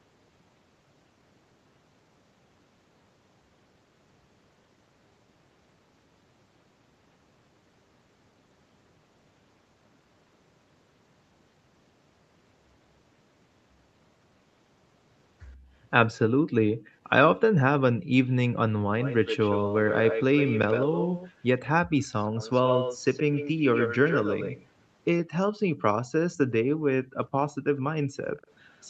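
A speech recording, heard over a call path whose top end stops at 8 kHz, in which the room sound briefly sinks away three times: a dip of about 16 dB from 15.56 to 15.73 s, then near-silences of about 38 dB from 17.93 to 18.11 s and from 28.03 to 28.17 s, each lasting well under a quarter of a second. These are background gated by the echo canceller, which clamped the microphone down hard while the far-end loudspeaker was active and released it moments later. A delayed copy of the voice also trails the speech, always about 121 ms behind. It appears as faint scraps from 16.79 to 16.87 s, from 25.8 to 26.38 s and from 28.37 to 28.84 s. It becomes much more prominent in two long stretches: from 18.99 to 21.42 s it is clearly audible, and from 22.21 to 24.66 s it is nearly as loud as the speech itself. This is an echo leak, the likely result of the loudspeaker side's echo canceller failing to remove everything its microphone picked up, so part of the playback was sent back into the call.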